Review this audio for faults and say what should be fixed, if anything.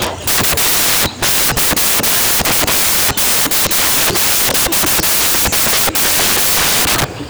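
The whole clip has samples built from the wrong bytes, start to finish. Each sample's bytes are being put together in the wrong order or offset by one, so the jittery low bits land in the loud part of every value. The result is loud, harsh broadband noise over the speech. Fix the reader's byte order and alignment so it matches how the file was written.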